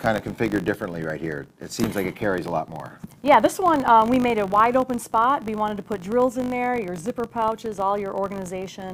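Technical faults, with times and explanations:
Throughout, filter restarted on every block. A 50 Hz buzz follows the level, because the filter starts each 20 ms block from silence and ticks.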